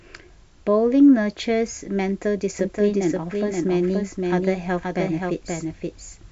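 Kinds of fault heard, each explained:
Doubled audio track: from 2.59 s to the end, a full-band copy trails about half a second behind, somewhat quieter, likely from a slower capture path.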